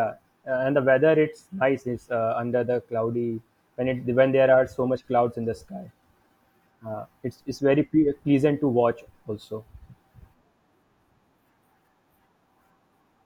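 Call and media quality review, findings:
No faults found in the speech recording. Nothing heard calls for follow-up on the call or media path.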